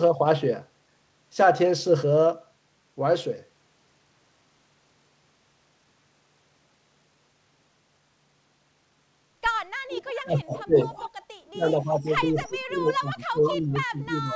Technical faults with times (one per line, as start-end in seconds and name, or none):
9.89-10.12 echo leak
10.23-10.89 speech suppressed in double talk
10.53-11.10 echo leak
11.20-11.24 background gated by the echo canceller
11.53-14.35 speech suppressed in double talk
11.69-12.13 echo leak
13.44-13.48 echo leak